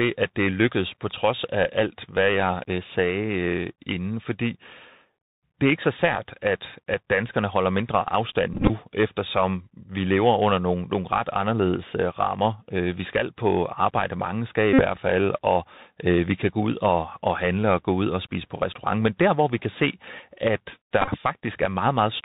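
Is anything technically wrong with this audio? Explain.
Yes. Throughout, the speech carries Bluetooth CVSD headset codec damage: the 64 kbit/s one-bit delta coder cuts everything above 4 kHz, s sounds turn scratchy and a granular hiss sits underneath. Unlike ordinary low-pass filtering, loud bright sounds distort because the adaptive step cannot keep up.

Bluetooth headset packet repeated occurs at 8.53–8.70 s, 14.73–14.82 s and 21.02–21.08 s. The headset replays the last good packet's bits, so each patch of loss, 82.5, 52.5 and 37.5 ms, becomes a short buzz near 267 Hz, not a silent dropout. The first and third are broken into short runs.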